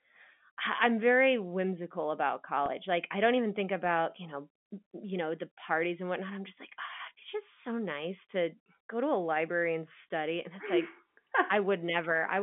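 At 2.66 to 2.68 s the speech has a packet loss with pitch repetition. A gap of about 20 ms, which fits a single lost packet, was bridged by repeating the last pitch period, heard as a brief buzzy hold. The waveform shows identical repeated cycles, and the spectrogram shows momentarily frozen harmonic stripes, all kept under the telephone band's 3.5 kHz ceiling.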